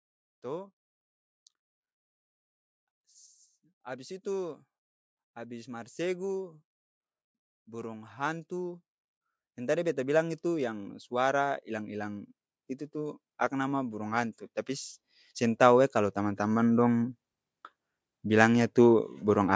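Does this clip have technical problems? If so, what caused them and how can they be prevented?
Yes, there's automatic gain rising in this speech, from 9.55 to 12.3 s and again from 12.92 to 17.13 s, each time by about 7 dB. The AGC judged the input too quiet and slowly ramped up, lifting voice and background together. To prevent it, set a healthy fixed mic level and switch off automatic gain.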